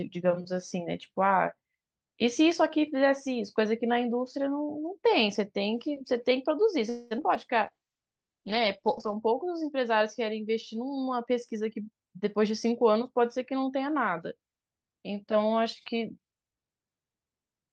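Right at 6.89 s the sound stops moving forward and gets stretched into a short buzzy tail that fades, lasting until about 7.13 s. That's a call audio freeze, most likely packets stalling in transit so the jitter buffer ran dry and the receiver had nothing new to play. About 214 ms of filler gets inserted, but nothing is actually lost. When the audio resumes, it picks up exactly where it left off, just that much later than before.

Straight after, there are three quick blips of short concealed packet loss, at 7.17 to 7.20 s, 7.22 to 7.25 s and 7.35 to 7.37 s. Each one is a 20 ms chunk that never reached the decoder in time. The receiver patched each hole by extending the previous sound for a few milliseconds and then crossfading back into real audio, so you hear a tiny smear or wobble rather than a dropout. The third patch is shorter than the gap it covers, which trims the delay back by roughly 15 ms.

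From 7.66 s to 11.34 s there's a call bitrate drop. The bandwidth estimate fell, and the encoder was pushed from 48 kbps down to 10 kbps, staying at the bottom for about 1.4 s. At that rate Opus codes much more coarsely and narrows the audio band from 20 kHz to 8 kHz. So the speech loses its top end and turns muffled and a bit watery, then brightens again as the rate climbs back.

Overlapping the start of that, between 7.73 and 7.90 s, there's a jitter buffer slow-down. The buffer was running low or had just raised its target delay, so the receiver built up a reserve by repeating single pitch periods over and over, adding 48 ms. Playback drops to 77% speed with the pitch unchanged, which gives drawn-out sounds for that stretch.

Later, from 11.83 to 14.28 s, the opposite happens with a jitter buffer speed-up. By then the buffer was holding more than its target, so the receiver clipped out tiny pitch-period slices, roughly 200 ms in total. 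Playback runs at about 108% speed at the same pitch, so the speech comes across a touch hurried until the delay settles.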